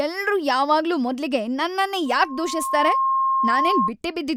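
At 2.05 s, after "ಎಲ್ರೂ ಯಾವಾಗ್ಲೂ ಮೊದ್ಲಿಗೆ ನನ್ನನ್ನೇ", the microphone picks up its own loudspeaker and the loop gain passes one at 1.1 kHz, causing loudspeaker feedback squeal. A pure tone swells for under a second to sit about 5 dB above the speech, then stops at 3.92 s.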